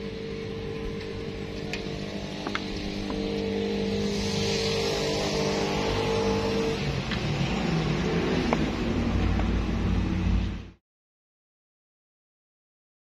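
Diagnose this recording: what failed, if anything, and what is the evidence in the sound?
Nothing failed; the fade-out near 10.8 s is smooth.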